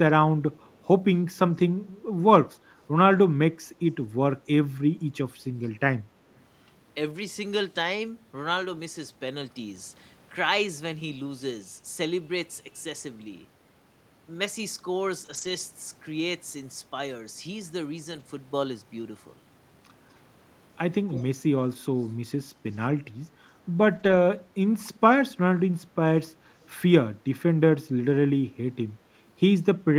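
Right at the start, from 0.63 to 0.78 s, there's a very faint delayed copy of the speech trailing about 228 ms behind, sitting way down, maybe 40 dB under the talker. That's likely an echo leak: the far end on a loudspeaker, its echo canceller letting a scrap of the returned audio slip back into the call.

At 3.17 s there's a brief rough, noisy moment, about 20 ms long. That's a lost packet rebuilt from error correction. The packet went missing, but the next one carried a low-bitrate copy, so the decoder filled the slot instead of leaving a hole. The same thing happens over longer runs at 15.25 to 15.51 s (about 140 ms, which fits seven 20 ms packets) and 18.11 to 18.21 s (about 60 ms). No gaps in either, just a coarser, grainier texture while the backup copies play.

At 21.11 to 21.24 s the echo leak comes back with the same 228 ms lag, but much louder this time, only around 15 dB below the speech.

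Finally, 23.95 to 24.17 s is another error-correction rebuild, roughly 120 ms. The sound stays continuous but goes rough and noisy until clean packets resume.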